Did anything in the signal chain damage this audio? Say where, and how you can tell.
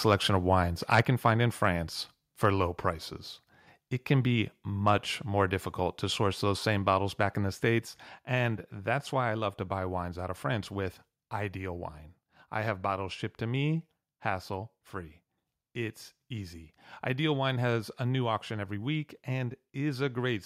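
Yes. Between 0.93 and 1.0 s, right after "of wines", the loudest peaks are flattened and take on a harsh crackle. This is microphone overload at the converter, most likely from input gain driving peaks about 5 dB past full scale, squaring off a few percent of samples. Codec artefacts would smear rather than snap.

At 1.02 s, just before "can find in", voice and background together drop by about 3 dB in one step. This is a microphone volume step-down, likely the call processing cutting device input gain after that overload. Compression would ease the level back in gradually.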